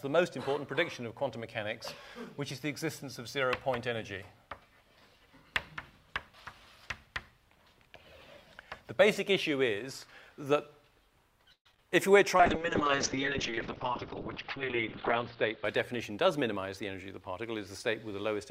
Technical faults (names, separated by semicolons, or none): repeated packet loss (robotic sound); call bitrate drop; jitter buffer speed-up